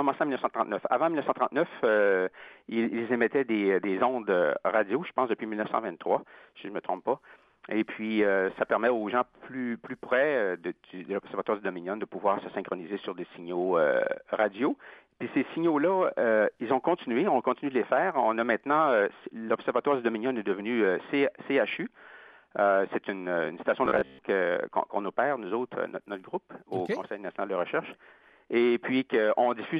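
From 23.86 to 24.19 s the sound turns into a rigid, metallic buzz pitched at 66.7 Hz. This is robotic sound from repeated short buffers, likely caused by audio arriving too late, so a roughly 15 ms slice repeats through most of that stretch.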